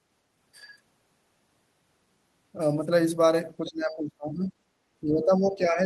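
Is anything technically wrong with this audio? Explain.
Yes. Speech is suppressed in double talk from 3.61 to 4.54 s and from 5.01 s to the end. An echo canceller likely mistook this side's speech for echo while far-end speech overlapped, so the speech drops by roughly 25 dB and then about 20 dB.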